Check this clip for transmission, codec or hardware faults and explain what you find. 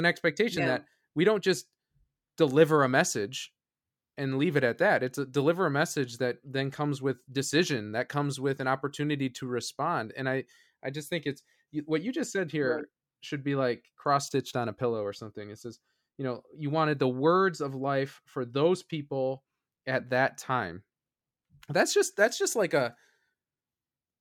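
I found no faults to report in this clip.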